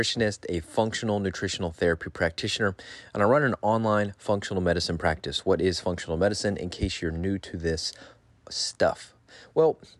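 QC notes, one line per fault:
Nothing to flag on this speech clip; no faults turned up.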